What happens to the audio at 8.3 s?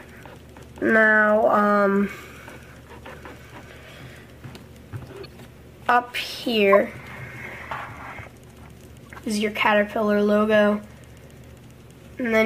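Nothing goes wrong at 8.3 s; the audio plays through that point intact, with no dropout, click or distortion.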